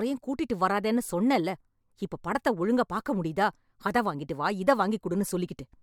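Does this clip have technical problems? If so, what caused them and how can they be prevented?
No, no technical faults here.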